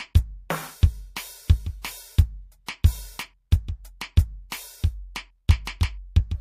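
Music with pre-echo before four attacks, at 1.82, 2.66, 4.50 and 5.65 s. Hiss rises about 14 to 25 dB for roughly 20 to 24 ms first. That fits a 36 ms transform block that never switched to short blocks.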